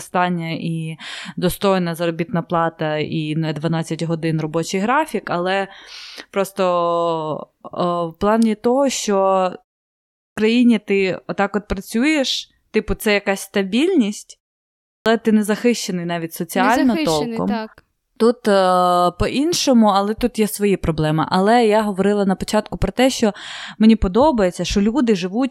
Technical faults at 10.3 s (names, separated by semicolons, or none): clipped start after a pause